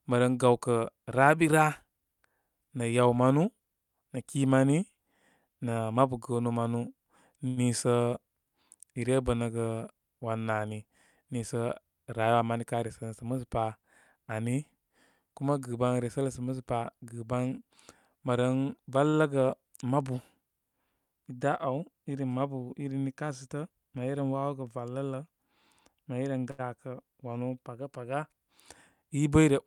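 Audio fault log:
7.47, 19.09 and 26.51 s: short stall from a late packet. A packet arrived late and the jitter buffer ran dry, so the receiver stretched the last sound by 94, 39 and 79 ms respectively until it came, then resumed where it left off. Nothing is lost, but a speech sound lingers too long.
12.26–13.33 s and 23.22–23.71 s: jitter buffer speed-up. With surplus audio queued, the receiver trimmed brief pitch-period slices again and again, running speech at 108% and 109% speed and shedding roughly 100 ms and 50 ms. The pitch stays put, but the speech sounds hurried.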